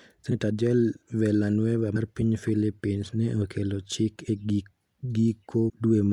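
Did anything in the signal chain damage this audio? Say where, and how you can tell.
Yes, compressed frames skipped, at the codec or decoding stage, at 0.30 s, 1.95 s, 4.27 s (just after "ne okelo chik") and 5.68 to 5.70 s. Each time the speech jumps forward: about three frames (around 70 ms) at the first two, two (about 50 ms) at the third, five (about 150 ms) at the last. The jumps come in 26.1 ms steps, one frame length.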